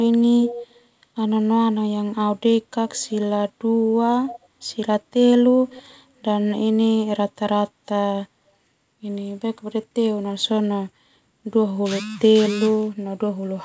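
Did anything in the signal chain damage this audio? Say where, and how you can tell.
Yes, at the call-processing stage, likely a far-end echo canceller letting loudspeaker pickup return as echo leak. A delayed copy trails the speech by 181 ms from 0.41 to 0.85 s, about 10 dB down, and briefly at 4.28 to 4.39 s, about 15 dB down, over a G.722 path band-limited to 8 kHz.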